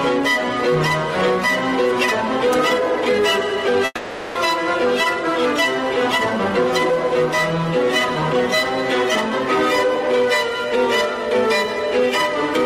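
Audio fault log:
3.85–4.37 s, long network dropout: half a second of fading buzz, a brief silence, then the sound resumes further on, likely from lost packets, far longer than a one-frame glitch.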